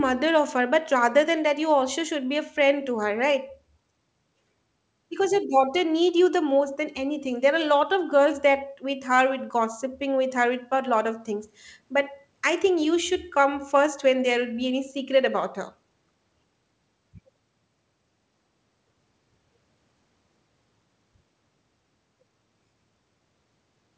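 Listening to this speech recording, nothing stood out as a technical fault at any point.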